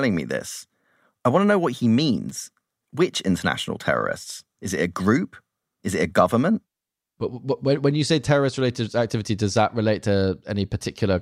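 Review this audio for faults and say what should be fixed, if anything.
A sharp, brief snap sits on top of the speech at 2.29 s, just after "to know what he", peaking around -25 dBFS. This electrical switching spike is likely an arc from a nearby switch, motor or static discharge picked up by the audio line. To prevent it, keep cables shielded and away from switching equipment, and use proper grounding.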